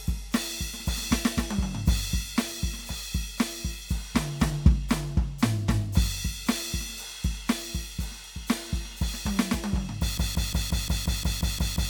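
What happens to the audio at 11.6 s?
At 11.6 s the music is caught in a broken-record loop: from 10.18 s to the end of the clip, a fragment of about 176 ms repeats exactly, back to back, about ten times, producing a rapid stuttering pulse with no forward motion. The music that should have followed is simply gone. The likely cause is a stalled player, encoder or stream that kept resending the last short piece it held.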